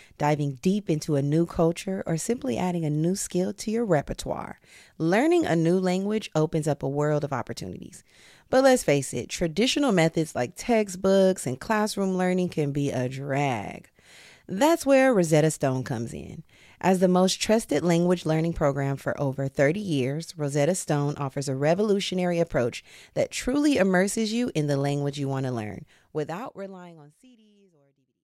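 Nothing in this speech recording points to a technical problem, and the gentle fade-out that begins around 26 seconds and runs to the end sounds like an ordinary editing touch.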